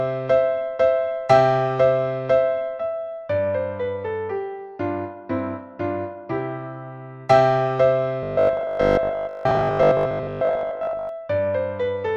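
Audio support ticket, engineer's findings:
Likely input starvation, 8.23–11.09 s: last 20 ms block looped over most of span. Robotic sound from repeated short buffers, fixed 50 Hz buzz.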